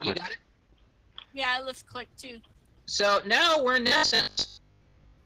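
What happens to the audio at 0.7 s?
At 0.7 s the audio is partway through an adaptive stream starting at a low bitrate, which runs from the very start to 3.76 s. The player begins on a cheap version to start fast, so the treble is thin or synthetic and codec artefacts are stronger, which fits roughly 16 kbit/s Opus. Unlike a fixed low-quality encode, the sound then brightens abruptly at 3.76 s, with no gap, once a richer stream near 64 kbit/s takes over.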